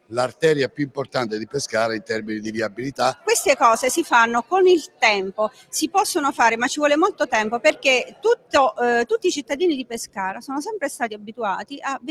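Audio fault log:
Throughout: noise suppressor applied to music or sounds. A speech-tuned noise suppressor stays active on this audio. It treats steady tones, ambience and reverb as noise and pulls them down. Sharp onsets pass more freely than sustained parts, so the gain keeps shifting underneath the sound. The level swings by roughly 15 dB as the suppressor opens and closes. The result is a pumping, unsteady texture, with held parts thinning out instead of sitting at a stable level.
0.69–1.15 s, 4.87–5.02 s, 5.49–5.73 s, 8.05–8.54 s, 9.84–10.18 s, 11.13–11.37 s, 11.64–11.79 s: sound cut by the noise suppressor. In these seven spans the suppressor judges the sound to be noise and cuts it harder than elsewhere. The deepest drops reach about 17 dB, and about 15 dB in the last span. Each dip lasts roughly 150 to 400 ms. Steady or decaying material sinks or has its tail clipped short, so these moments sound hollowed out and abruptly quieter.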